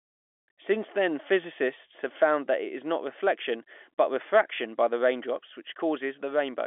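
Nothing stood out on listening to this speech, which comes through the telephone line with its usual narrow band.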